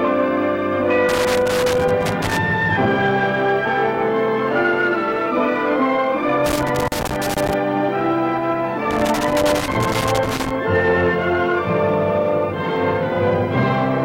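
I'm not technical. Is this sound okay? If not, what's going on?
No. Loose connector crackle from 1.09 to 2.37, 6.46 to 7.54 and 8.91 to 10.51 s: irregular scratchy bursts from a flaky cable contact, not steady hiss.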